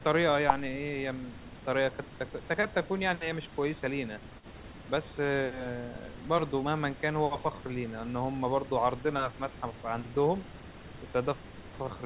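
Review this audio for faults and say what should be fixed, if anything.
Nothing stood out on listening, so there is nothing here that needs fixing.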